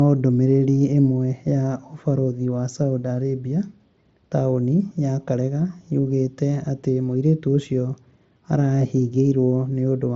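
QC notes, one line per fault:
No faults noted; the speech sits on a Bluetooth mSBC headset link, band-limited at 8 kHz, with the faint grain on louder syllables that this wideband codec leaves.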